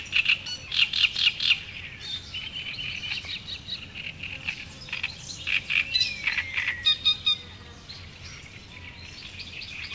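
No technical faults can be heard in this everyday sound recording. It has passed through a WebRTC call path, and the band stops at about 8 kHz, which fits a wideband codec such as G.722.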